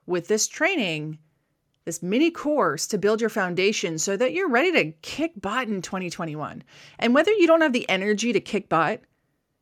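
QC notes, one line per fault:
Nothing stood out on listening through this speech recording.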